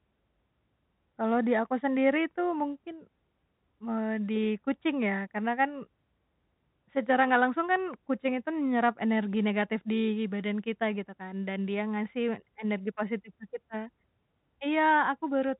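No technical faults are audible.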